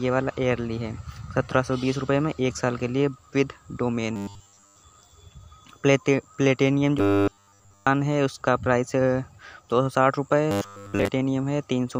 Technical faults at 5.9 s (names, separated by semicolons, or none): none